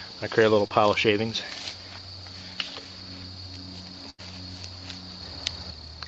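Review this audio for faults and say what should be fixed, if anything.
A short concealed packet loss occurs at 0.67 to 0.72 s. About 20 ms of the stream failed to reach the decoder in time, so the receiver bridged the hole by extending the preceding sound for roughly 26 ms before blending back into the real signal. The result is a brief smear or wobble in the audio, with whatever fell in that gap lost. A larger adaptive jitter buffer, or in-band forward error correction, would prevent this.

A burst of packet loss follows at 4.10 to 4.21 s. Roughly 80 ms of consecutive audio was lost or arrived too late to play. The decoder synthesised about 84 ms from the last sound it had, fading it as the gap lengthened, which produces a held buzz or decaying hiss. It then skipped about 11 ms when the real stream resumed, so the passage jumps forward slightly. The audio travels through an Opus call path at 24 kbps limited to 8 kHz, so everything above that is absent. 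Enabling FEC or redundancy and addressing network congestion would reduce such bursts.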